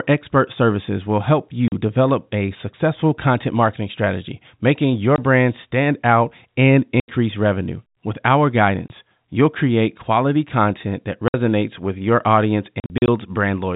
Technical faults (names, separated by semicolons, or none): packet loss filled with silence